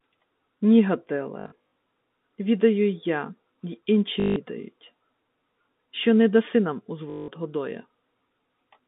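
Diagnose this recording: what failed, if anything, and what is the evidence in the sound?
Short robotic stutters, with a 50 Hz buzz, occur at 1.4 to 1.71 s, at 4.2 to 4.36 s just after "й я й", and at 7.1 to 7.28 s after "що не даси нам". At the network stage this is packet loss with the last packet repeated. The receiver replays the last packet until new ones arrive, and the buzz rate fits 20 ms packets.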